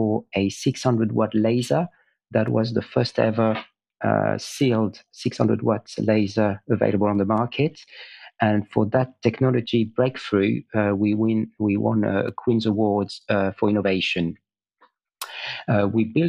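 Two independent clocks that likely disagree by something like 70 ppm make the buffer between them drift until a handful of samples, on the order of seven, is dropped or repeated, producing clock drift buffer slips. From 2.48 s to 14.74 s this happens roughly seven times, at a steady 2.45 s interval. Each slip leaves a small discontinuity in the waveform, heard as a brief, regular click or tick against the sound.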